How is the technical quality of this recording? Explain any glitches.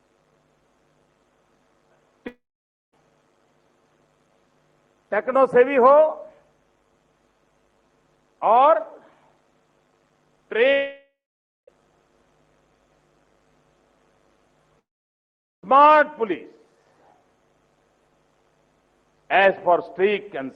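The recording has three gaps, each most likely caused by a long network dropout, heard at 2.27 to 2.94 s, 10.72 to 11.69 s and 14.79 to 15.64 s. About 0.66 s, 0.96 s and 0.84 s of audio are lost. Each time the receiver stretches the last sound into a fading buzz, then falls silent for 0.53 s, 0.53 s and 0.80 s. Playback resumes later in the material, skipping the lost part. The audio is band-limited near 12 kHz, consistent with a call codec.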